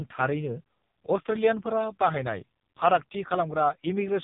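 From start to finish the speech carries heavy AMR narrowband mobile codec damage: nothing above 3.8 kHz survives, and the sparse pulse-driven vocal model, consistent with roughly 5.15 kbps, sounds buzzy and synthetic.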